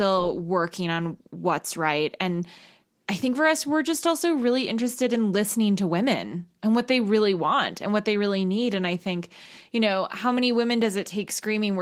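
No technical faults can be heard anywhere in this speech.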